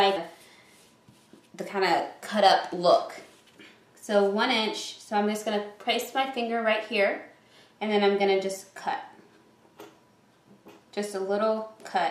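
At 0.16 s there is a brief disturbance from damaged data in a compressed stream: part of the encoded data was corrupted, so the decoder misread or rejected the affected frames, lost sync and resumed at the next valid frame header, producing a short glitch in the sound.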